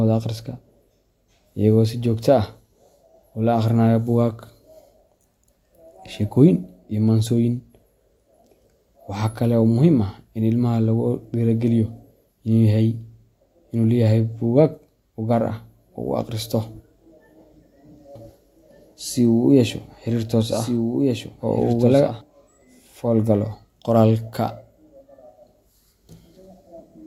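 From 18.15 s to 22.21 s the speech acquires a doubled audio track: a second, full-band copy runs about one and a half seconds behind the original, roughly 5 dB quieter, with no reverberant tail or room colouring, and it switches on and off abruptly. The likely cause is a slower capture path or an edit holding two misaligned copies. On a spectrogram, identical harmonic patterns repeat, shifted and slightly fainter; the waveform shows overlapping envelopes with sharp onset and cut-off.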